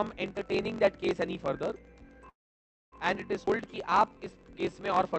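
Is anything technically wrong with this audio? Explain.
Yes, there are four faults. Throughout, a block size mismatch (truncated) adds a buzz at about 45.9 Hz. Block ends are discarded, which fits 1024-sample writes, so the audio runs 1.07 times fast with its timbre kept.

From 2.29 to 2.95 s, a call audio freeze, likely from packets held up in transit, fades into about 580 ms of silence. Playback resumes where it stopped, so nothing is lost.

From 3.46 to 3.50 s, a skip ahead jumps over roughly a tenth of a second of audio. Unlike the freeze, there is barely a gap, but material is missing.

From 3.57 to 4.74 s, a jitter buffer slow-down repeats short pitch periods, adding 119 ms and playing at 90% speed. Sounds are drawn out at unchanged pitch.

All of this comes through a call path whose high-frequency content stops near 8 kHz.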